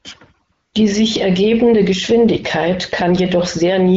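From 0.53 to 0.73 s, about 200 ms, the background gives way to AMR comfort noise. The phone treated this stretch as silence and stopped sending speech frames, so the receiver synthesised a smooth, steady hiss from a rough description of the noise's level and spectrum. Unlike a dropout, the gap is filled rather than dead, and unlike packet-loss concealment, nothing is repeated or smeared; the texture simply switches. The surrounding wideband coding shows only light damage.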